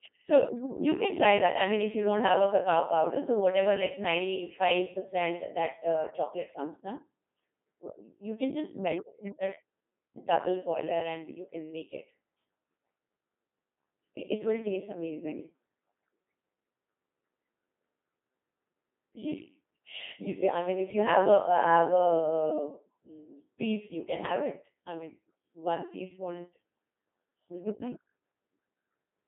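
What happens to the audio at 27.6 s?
At 27.6 s, as throughout the clip, the speech passes through a Codec 2 vocoder, consistent with its 2.4 kbit/s mode. Only pitch, voicing, energy and a spectral envelope survive, so the decoder rebuilds the speech from sine waves. It sounds robotic and buzzy, with nothing above 3.8 kHz.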